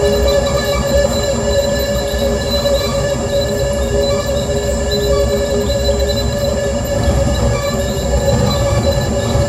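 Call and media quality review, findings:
No faults found in the music clip. Nothing to attribute to any component in the capture, transport or playback chain.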